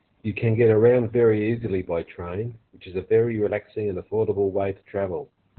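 From start to finish the speech carries heavy Opus voice compression. The SILK linear-prediction coder is working in narrowband, so the band stops at about 4.3 kHz and the excitation is coded very coarsely, which fits a very low rate of around 8 kbps. The speech sounds muffled, hoarse and faintly robotic. A spectrogram shows a flat ceiling near 4.3 kHz with blank space above, and smeared, blotchy harmonics beneath it.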